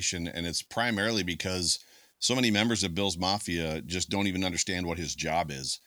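No technical faults are audible anywhere in the speech recording.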